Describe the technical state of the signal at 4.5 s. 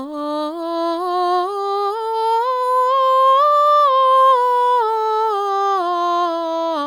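At 4.5 s the music plays through intact, with no dropout, click, distortion or other audible fault at that moment.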